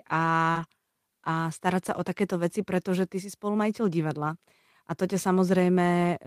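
Speech, with two kinds of packet-loss repair audible early on. At 0.51 to 0.57 s there is short concealed packet loss: about 40 ms of audio never arrived, and the receiver covered roughly 36 ms of it by stretching the preceding sound forward before easing back into real signal. That invented continuation makes a brief smeared, wobbly patch. Nothing new is heard in it, only a prolonged echo of what came just before. Overlapping its tail, from 0.55 to 0.65 s, and again at 1.87 to 1.89 s just before "sa o", is a lost packet rebuilt from error correction. These stretches of 60 ms and 20 ms, which fit three separate 20 ms packets and then a single one, were replaced by a low-bitrate copy carried in the following packet. What separates this from the concealment is that the actual content is still there, with no gap and no repeated sound, but it comes through coarser and grainier, as a moment of noisy roughness.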